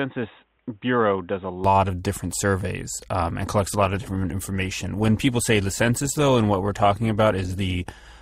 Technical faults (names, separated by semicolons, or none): input switched to a poorer device; adaptive stream at a lower bitrate